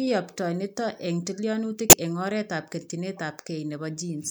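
At 1.90 to 1.93 s and 3.16 to 3.19 s, a corrupt frame was decoded. Damaged compressed data was played anyway. Each is a brief chirp, squeak, blip or burst of noise, the first loud and the second faint.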